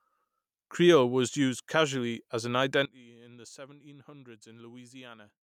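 Right after "used casually as an", at about 2.85 s, the speech suddenly drops by about 20 dB and stays down to the end at 5.6 s, leaving a faint version of the voice. The likely culprit is one channel inverted: with one stereo side flipped in polarity, everything shared by both channels cancels when they're folded to mono, so the centred voice mostly disappears and only the small left-right difference remains.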